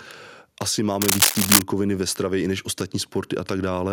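From 1.02 to 1.62 s, cable scratch noise rustles above the speech in dense, uneven bursts rather than single clicks, likely a worn connector moving.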